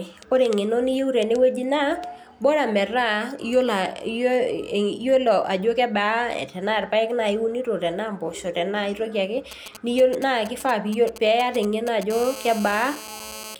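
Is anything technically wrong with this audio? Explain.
Yes. Two kinds of radio interference from a nearby 2G handset break into the speech near the end.

From 9.51 to 12.12 s there are GSM signalling bursts. The phone is only exchanging control traffic with the network, so it transmits in brief clusters. The audio circuitry rectifies each cluster into sound: a galloping dit-dit-dit of ticks and short buzzes roughly 15 dB below the speech. Mains hum is continuous at 50 or 60 Hz. These bursts are intermittent, with a rasp that repeats about 217 times a second.

From 12.13 to 13.55 s the bursts become a steady GSM phone buzz, which fits the handset having moved into a call. It now transmits in regular bursts at about 217 Hz, and the rectified pulses make a hard, raspy buzz with many harmonics, about 15 dB below the speech. It does not follow the speech at all. It differs from the signalling bursts because it is unbroken rather than galloping, and from mains hum because it sounds harsher and buzzier and sits at 217 Hz.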